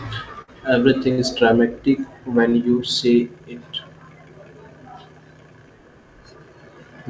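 At 0.42 and 1.12 s, bursts of packet loss cut out about 60 ms of speech. The receiver stretched the last sound and faded it, then skipped 60 ms. At 2.50 s, just before "you say it", a short concealed packet loss leaves a brief 20 ms smear, over G.722 audio that stops at 8 kHz.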